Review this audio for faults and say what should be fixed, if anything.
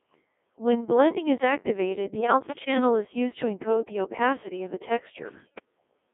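The whole clip has gone through the Codec 2 vocoder, and it's heavily damaged. The speech sounds buzzy and robotic because the decoder rebuilds the voice from sine waves using only pitch, voicing, energy and a spectral envelope. None of the original waveform survives. The very coarse texture suggests the 1.6 kbit/s mode, and the band is limited to roughly 250 Hz to 3.6 kHz. If you need natural-sounding speech, record or send it over a path that doesn't use a parametric vocoder.

There are also two bursts of bit errors on digital voice radio, from 2.17 to 2.77 s and from 5.40 to 5.65 s. At this bitrate every bit in a frame helps set that frame's pitch, level, voicing or spectrum. With something like one bit in twenty flipped, the voice jumps around in pitch and level and breaks into warbles and bleepy gibberish. The first burst spans what sounds like a dozen or more frames, the second only a handful. 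To prevent this, keep the radio link well inside coverage or add stronger error protection so corrupted frames don't reach the decoder.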